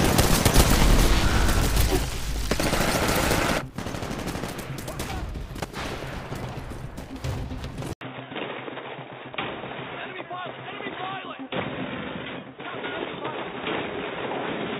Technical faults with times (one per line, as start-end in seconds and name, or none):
7.93-14.79 input switched to a poorer device